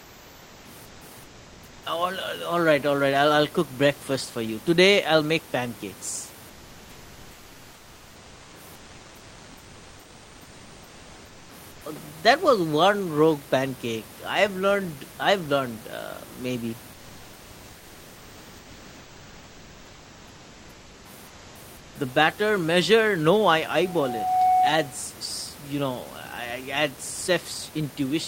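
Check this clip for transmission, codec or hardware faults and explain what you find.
Two faults are present: comfort noise replacing the background in three pauses, and a loudspeaker feedback squeal near the end.

From 0.00 to 1.83 s, 6.49 to 11.81 s and 16.93 to 21.95 s, the sender likely stopped transmitting during silence (discontinuous transmission, as in Opus DTX). The receiver filled these gaps with synthetic comfort noise, so the real background gives way to a flat, featureless hiss.

From 23.81 to 25.14 s, a microphone picked up its own loudspeaker. The loop gain went above one at 740 Hz, producing a feedback squeal that swells within about 0.7 s to a few decibels above the speech. The room's own noise, about 24 dB below the speech, is normal and not a fault.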